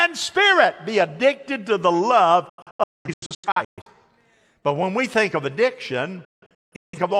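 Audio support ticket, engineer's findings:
Digital broadcast dropout, 2.49 to 3.90 s, right after "addicted to the love". Speech mutes in several short holes, about 0.85 s lost, longest hole 0.21 s. Receiver muting on corrupt or missing frames. Hard 3 ms fades.

Second dropout, 6.25 to 6.98 s. Same mechanism: about 0.55 s muted in short bursts, longest 0.17 s. Content sent during the holes is gone, not delayed. Suspect weak RF reception or frame checksum failures at the receiver.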